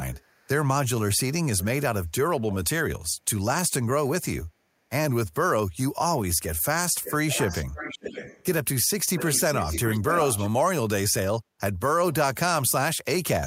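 At 0.12 to 0.48 s, a faint echo leak trails the speech by about 400 ms. Another brief one follows at 1.58 to 1.65 s, lagging about 490 ms. From 7.03 to 7.13 s, 7.29 to 8.45 s and 9.16 to 10.49 s, the echo sits about 560 ms behind. It grows louder each time until it nearly matches the speech. The likely cause is a far-end loudspeaker whose echo canceller let its microphone pickup return.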